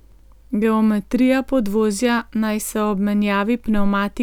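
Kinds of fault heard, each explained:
No technical faults are audible anywhere in this speech recording.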